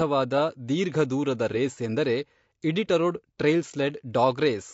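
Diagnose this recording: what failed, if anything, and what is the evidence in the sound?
Codec stage: speech sounds rough and grainy throughout, with spectrogram noise between harmonics; likely low-delay AAC compression, consistent with about 32 kbps.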